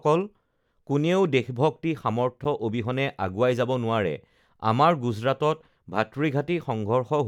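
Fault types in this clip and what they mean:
Gap at a join of encoded pieces: The speech stops for 9.8 ms at 2.44 s, then resumes where it left off. Two separately encoded sections were joined untrimmed, so encoder start delay and end padding remain. The codec softens the abrupt edges.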